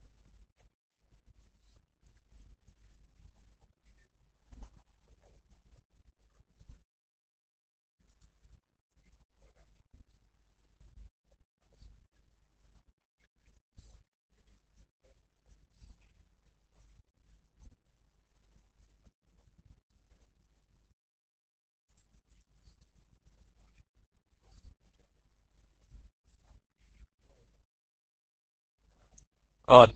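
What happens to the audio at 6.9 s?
At 6.82 s the speech cuts out and the output goes silent until 8.00 s, a gap of about 1.17 s, after which the sound resumes. This is a playback stall: the player likely ran short of data or had its output thread held up, so nothing reached the output until it recovered. It is heard as an abrupt mid-flow dropout to silence, not a fade or a glitch.

Through the same moment, and across the whole clip, the speech carries plainly audible Opus voice compression. The coarse, slightly hoarse and robotic texture points to the SILK linear-prediction coder running at a low rate, consistent with roughly 12 kbps in 20 ms frames. The excitation is coded crudely, which roughens the voicing. The band is also cut off, with nothing above 13.6 kHz.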